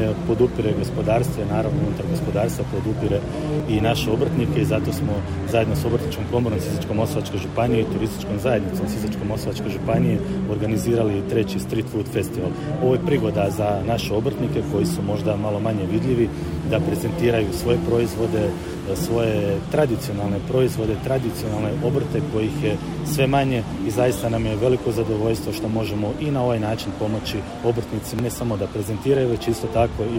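At 3.6 s the sound jumps ahead, and the same thing happens at 18.74 s and 28.19 s, with the skips getting bigger: roughly 20 ms, then around 50 ms, then about 70 ms lost. That pattern is most likely a dropped buffer (overrun), where the capture side didn't grab its samples before the hardware overwrote them. So there's no gap, just a direct splice across missing audio.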